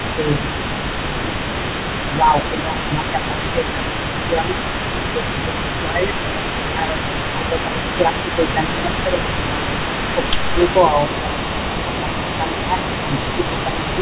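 From the start to the end at 14 s, a faint delayed copy of the speech trails the talker by about 0.27 s, sitting roughly 10 dB below it. This is an echo leak: the far end likely played the call over a loudspeaker, and its echo canceller let part of the microphone pickup return. Within that, the talker's level dips by around 5 dB at 0.15–0.57 s, 1.02–1.35 s, 2.03–4.58 s, 5.14–9.68 s and 10.15 s to the end. This is speech suppressed in double talk: the canceller likely could not separate the talker from the echo and turned both down. All of it is heard through a narrowband channel with nothing above 4 kHz, which fits a G.711 telephone codec.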